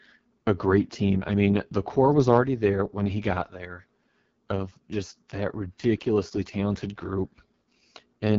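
Throughout the speech, AMR wideband (HD Voice) coding is heard, its heavy damage pointing to the lowest 6.6 kbit/s mode: speech sounds rough and raspy. A spectrogram shows nothing above 7.1 kHz, with the top band filled by smeared noise rather than harmonics.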